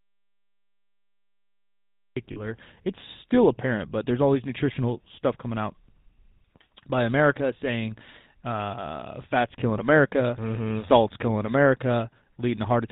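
Speech that's been through the GSM full-rate codec for its whole length, and the damage is easy to hear: nothing makes it above 4 kHz, and the pulse-driven vocal-tract model leaves the voice with that familiar buzzy, gravelly edge, which fits the 13 kbps full-rate coder. The clip opens in the middle of an audio dropout to silence, with plain silence and no room tone from the start until about 2.17 s. That's most likely a lost input or link, with the recorder just writing silence until the signal came back. Right after, from 2.32 to 2.41 s, you get lost GSM frames. About 40 ms is held as a rough, metallic ring while the decoder repeats the last good frame's settings, which points to two dropped 20 ms frames.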